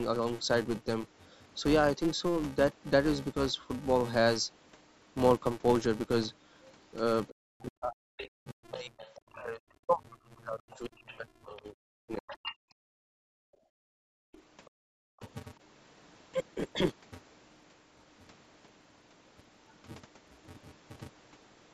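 Throughout the speech, a filter restarted on every block leaves a steady buzz at 345 Hz, which fits a 128-sample block. On a spectrogram it shows as a thin horizontal line that brightens with loudness.

From 7.28 to 9.21 s a second voice sits well below the speaker, likely the other side's voice leaking through an incomplete echo cancellation. It appears as faint, separate harmonic traces.

From 7.43 to 13.25 s the speaker's voice repeatedly dips and breaks up, for about four seconds in total and by roughly 40 dB at its deepest. This is likely speech suppressed in double talk. The waveform shows the envelope collapsing in chunks.

The leaking voice returns from 10.72 to 12.55 s, somewhat stronger this time, overlapping those dropouts.

From 13.53 to 15.2 s the room sound is gated by the echo canceller, falling by about 40 dB for roughly 1.5 s in total. The spectrogram shows near-black gaps in the noise floor.

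A very faint leak of the other side follows, from 14.33 to 15.29 s.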